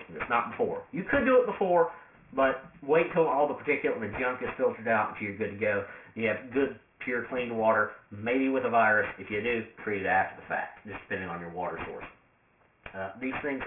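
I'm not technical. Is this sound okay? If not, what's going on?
No. Aliasing runs throughout: the sample rate was cut, which fits about 6 kHz, without filtering, so sound above 3 kHz folds back as gritty, metallic false tones.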